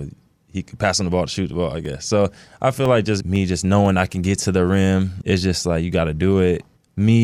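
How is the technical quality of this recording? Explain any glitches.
The recording has one fault: periodic USB or driver dropouts in the speech, starting just after "on the ball to" and ending just before "to the rim is", from 1.35 s to 4.36 s. Every 0.5 s, about seven times in all, a couple of milliseconds of audio drop out and are replaced by silence. This is what happens when a recurring background task briefly stalls the USB bus or audio driver. The result is a steady train of ticks, evenly spaced and audible only against the voice. On a waveform each one shows as a tiny flat gap. On a spectrogram each appears as a thin vertical broadband line at regular half-second intervals.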